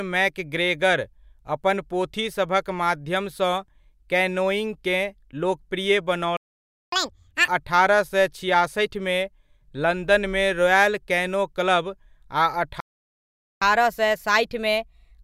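The player likely starved of data, causing a playback stall: the speech cuts to silence from 6.37 to 6.92 s, then again from 12.80 to 13.62 s. After each gap, catch-up at higher speed resamples the backlog: doubled speed, roughly ten semitones sharp, until 7.48 s, then 1.15 times speed, about two semitones high, through to the end.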